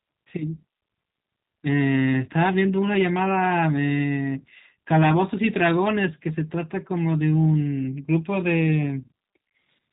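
Speech, and the whole thing has gone through a G.729 codec, with the damage plainly audible from start to finish. Nothing survives above 4 kHz, so it sounds boxed-in and telephone-narrow. Because the codec rebuilds each 10 ms frame from a vocal-tract filter, a pitch predictor and a few sparse pulses, the voice comes out slightly gritty and synthetic. That roughness fits a low-rate 8 kbit/s VoIP link.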